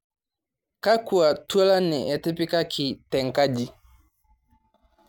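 No technical faults are audible anywhere in the speech.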